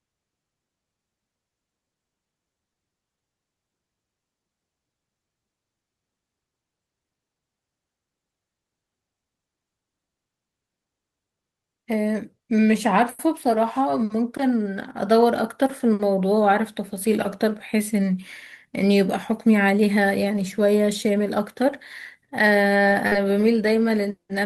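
Short concealed packet loss at 23.07 to 23.14 s in this speech recording: about 40 ms of audio arrived too late or not at all, and the decoder patched the gap by extending the preceding sound before crossfading back, leaving a brief smear in the speech.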